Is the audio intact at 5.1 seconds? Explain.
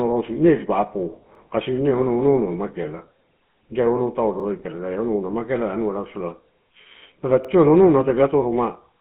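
No. At 5.1 seconds, as throughout the clip, the speech carries GSM full-rate codec damage. The vocal tract is modelled and driven by sparse regular pulses, which fits 13 kbps coding, giving a buzzy, gravelly roughness. A spectrogram shows energy confined to roughly 150 Hz to 3.4 kHz.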